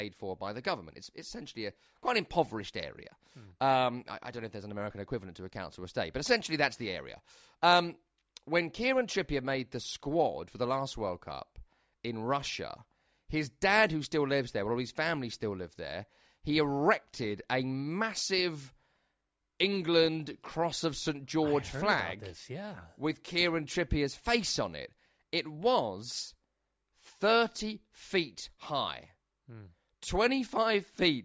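No faults are audible anywhere in the recording.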